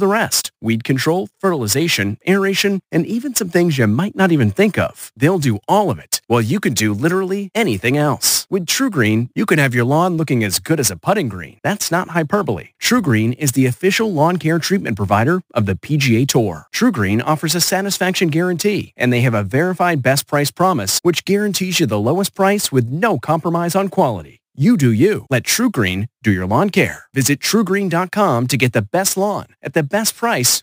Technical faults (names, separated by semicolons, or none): imaging from sample-and-hold upsampling